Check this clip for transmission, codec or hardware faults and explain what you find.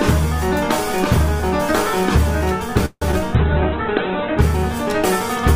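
Three transmission faults cluster in the second half of the clip.

A call audio freeze runs from 2.85 to 3.03 s. Packets were likely delayed and the jitter buffer emptied. A fading buzz or hiss fills the gap, with 70 ms of silence.

Short concealed packet loss follows at 3.11 to 3.15 s. Twenty milliseconds never arrived. The decoder extended the previous sound, leaving a brief smear.

A call bitrate drop lasts from 3.36 to 4.47 s. The encoder fell from 48 to 8 kbps, and bandwidth shrank from 20 kHz to 4 kHz. The sound turns muffled and rough.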